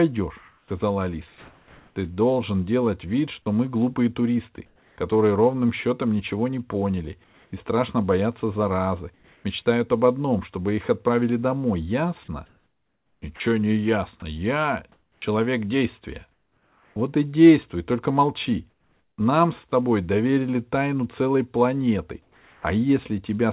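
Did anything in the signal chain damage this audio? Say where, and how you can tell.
Yes. From 0.38 to 4.98 s, ending just before "ровным счетом ничего не", and again from 12.46 to 16.96 s, the speech turns choppy as real sound flickers into synthetic noise. This is likely sound chopped by the call's voice detector.

Pauses at 7.24–7.52 s (after "счетом ничего не поняли"), 9.14–9.44 s (after "страшно боятся заразы"), 18.7–19.72 s and 22.22–22.64 s go flat and featureless, the first, second and last about 2, 3 and 5 dB quieter. This is likely comfort noise replacing the background during discontinuous transmission.

At 19.7 s a tiny bit of sound vanishes into steady noise. This is likely sound dropped by the voice detector, which briefly mistook it for background.

At 22.61–22.64 s the next sound starts abruptly, without its soft beginning. This is likely an onset clipped by the voice detector reacting late. 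Throughout, the G.711 call path leaves nothing above 4 kHz.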